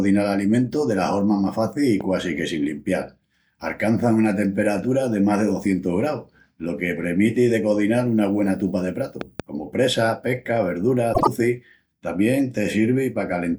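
At 2.01 to 2.03 s a loud pop, about 5 dB above the speech, strikes once. At 9.21 to 9.42 s a second loud pop comes as a double pop, two quick thumps about 10 dB above. Each is likely a voltage pulse from a switch, plug or static. Unlike a dropout, the speech carries on underneath without a gap.

From 11.13 to 11.28 s, frames out of order: two neighbouring blocks of about 48 ms each, which fits runs of two frames, play with their halves swapped. The result is a brief garbled flutter. Unlike a dropout, no time is lost.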